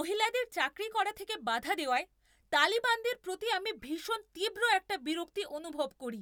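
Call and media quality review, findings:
No audible faults found in the speech; nothing to escalate.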